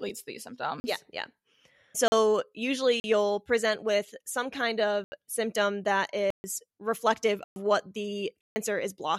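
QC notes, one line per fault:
0.80–8.56 s, block of digital silence: seven hard dropouts to silence at 0.80, 2.08 and 3.00 s (40 ms each), 5.04 s (80 ms), 6.30 s (136 ms), 7.44 s (120 ms) and 8.41 s (150 ms). Each one cuts the speech off abruptly and brings it back with no fade. The 40 ms gaps and the longer ones are all long enough to come across as holes rather than ticks. The pattern suggests an output buffer that was not filled in time.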